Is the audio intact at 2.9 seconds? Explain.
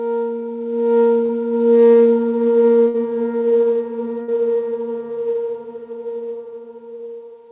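No, 2.9 seconds falls right in a burst of packet loss running from about 2.88 to 2.96 s. A short run of packets never arrived in time, so the receiver stretched the last bit of sound it had and faded it out over about 60 ms. You hear a brief held buzz or hiss that dies away, then the audio picks up about 60 ms further along, with that stretch simply gone.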